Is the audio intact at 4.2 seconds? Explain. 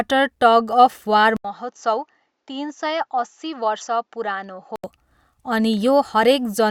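No. From 1.37 to 4.84 s the speech turns dull, quieter, and cut off above 7.6 kHz, after an 80 ms gap. Likely an input switched to a poorer device.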